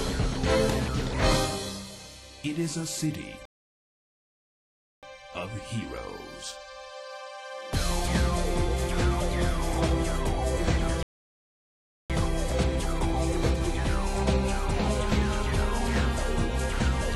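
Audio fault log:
3.45 to 5.03 s and 11.03 to 12.10 s, rebuffering stall: playback halts into silence for 1.57 s and then 1.07 s, picking up exactly where it stopped. The player exhausted its downloaded audio and waited for more, so nothing is missing, but about 2.6 s is added.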